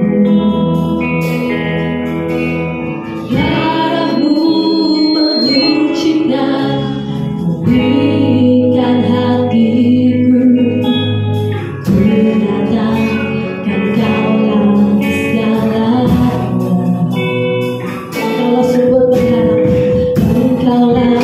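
From 4.02 s to 5.83 s a loudspeaker feedback squeal takes over. A single piercing tone at 4.2 kHz rises over about a second and a half and ends up roughly as loud as the sound itself. The microphone was picking up the loudspeaker it fed, and at 4.2 kHz the loop gain went above one, so that frequency kept feeding itself. On a spectrogram it is one bright horizontal line at 4.2 kHz that grows stronger. The waveform envelope swells over the same span.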